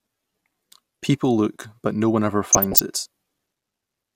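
DAB burbling breaks into the speech from 0.72 to 1.04 s and again from 2.46 to 2.82 s. Weak reception let bit errors, a fraction of a percent, slip past error correction and corrupt sub-band samples, producing short blips of noise in single sub-bands over the speech.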